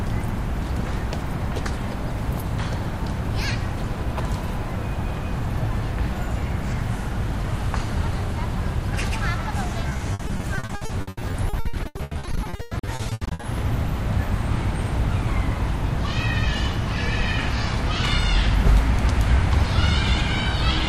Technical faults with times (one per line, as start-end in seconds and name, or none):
9.89-13.45 repeated packet loss (robotic sound)